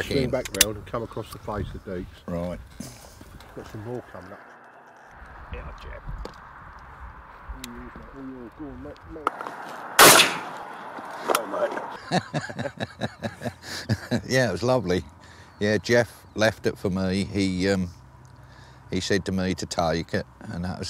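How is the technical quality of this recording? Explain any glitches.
No glitches or technical faults can be heard here.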